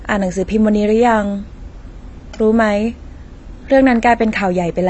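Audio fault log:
throughout, AAC compression: nothing above 8.1 kHz and a dull, fizzy smear on the speech, likely a low-bitrate AAC-LC encode around 24 kbps cutting the top.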